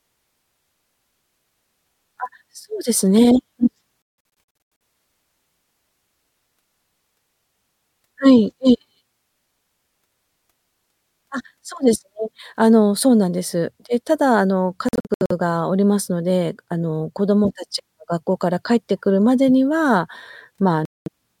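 The speech keeps cutting out in short silent holes, scattered from 4.02 to 4.81 s, 14.89 to 15.32 s, and 20.85 to 21.09 s, then picks up as if it had played on. That points to a likely Bluetooth dropout, with packets reaching the headphones too late.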